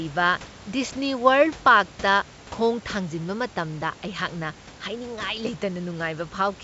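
No faults found in this speech clip; the room noise sits about 20 dB below the speech, and the band-limited, lightly hissy top end fits G.722 wideband telephone coding at its full 64 kbit/s rate.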